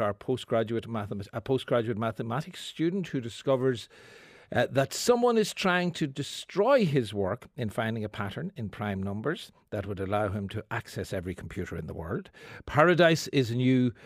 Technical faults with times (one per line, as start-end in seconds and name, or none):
none